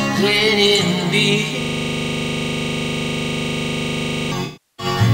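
From 1.61 to 4.32 s, a system hang loop repeats one 40 ms buffer about 68 times. The frozen system produces a steady 25 Hz buzz.

From 4.44 to 4.86 s, AAC frame loss with concealment fills the gap from the last good spectrum. It decays to a very faint noise floor and fades back in, consistent with about 16 lost frames.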